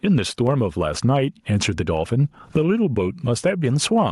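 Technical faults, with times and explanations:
Throughout: gain pumping. The gain swings by around 10 dB, and the level sounds flattened and squashed. The likely cause is input gain set far too high, with a fast limiter clamping down on each loud moment.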